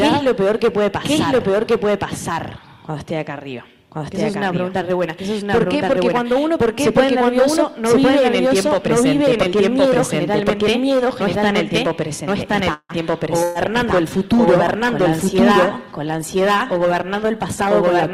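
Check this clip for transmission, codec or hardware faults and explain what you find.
Five faults are audible: a doubled track throughout, plus a freeze, a bitrate drop, a packet-loss burst and a speed-up late in the clip.

Doubled audio track, throughout: a second capture path or a misaligned edit has likely mixed the same audio in twice. A full-band copy, about as loud as the original, trails by about a second, producing a dry, uncoloured echo with no decay.

Call audio freeze, 12.73 to 12.92 s: the network held packets up, likely emptying the jitter buffer. The receiver stretched the last sound for 159 ms as a fading buzz or hiss, including 40 ms of silence, then resumed where it stopped. A gap was inserted but nothing was lost.

Call bitrate drop, 13.28 s to the end: a falling bandwidth estimate pushed the encoder from 48 kbps down to 18 kbps, and it stays there for the final 4.86 s. 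Coarser Opus coding makes the sound rougher, more watery and duller at the top end.

Burst of packet loss, 13.43 to 13.58 s: a run of packets was lost or arrived too late to play. The receiver filled 115 ms with a decaying continuation of the last sound, then jumped ahead. About 120 ms of audio is missing.

Jitter buffer speed-up, 15.86 to 17.67 s: excess buffered audio, typical after delayed packets arrive in a bunch, was trimmed by repeatedly cutting short pitch-period pieces. Roughly 150 ms was removed, so the passage runs at 109% speed, hurried but at unchanged pitch.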